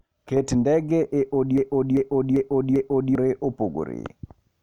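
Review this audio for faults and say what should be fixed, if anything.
There's a broken-record loop from 1.58 to 3.15 s, just after "ndege e": a roughly 390 ms slice of the speech repeats four times back to back. The likely cause is the player or stream stalling and resending its last buffer, so that stretch of audio is gone. Keep buffers fed and flag stalls instead of replaying.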